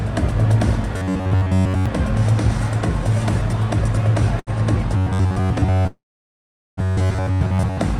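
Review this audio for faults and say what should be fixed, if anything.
Robotic sound from repeated short buffers at 0.97–1.86 s and 4.97–7.78 s: a rigid metallic buzz at 93.8 Hz, likely from a roughly 10.7 ms block replayed over most of the audio. It shows as evenly spaced harmonic stripes on a spectrogram. Prevention: deliver audio blocks on time so the output never has to recycle old ones.

Short stall from a late packet at 4.39–4.50 s: the sound is held for 74 ms with nothing lost, visible as a briefly repeated, flattened waveform segment. Prevention: give the jitter buffer enough depth to absorb delay spikes of this size.

Call audio freeze at 5.87–6.80 s: a fading buzz, then about 790 ms of silence, likely from delayed packets. It appears as a flat waveform gap, delaying the rest by 905 ms. Prevention: stabilise the network path and use adaptive jitter buffering that hides longer delays.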